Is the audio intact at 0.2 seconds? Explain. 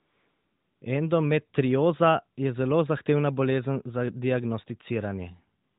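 No, from 0.0 to 0.82 s there is only a steady, smooth synthetic hiss: AMR comfort noise, where the phone stopped sending speech frames and the receiver generated substitute background noise.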